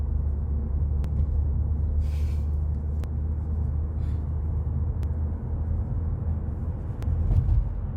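Overlapping time stamps between two-second stream segments made the player trim audio, so this sound clip clicks or skips at 1.04, 3.04, 5.03 and 7.03 s.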